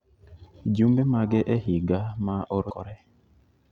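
Right at 2.70 s there's a tiny blip in the speech, only a few milliseconds long, and it's damaged data in the compressed stream. Some of the bytes in the encoded file got corrupted there, so the decoder couldn't read that frame properly. It lost sync and had to scan ahead for the next valid frame header before it could carry on. What you hear is that very short glitch as the decoder stumbles over the bad spot.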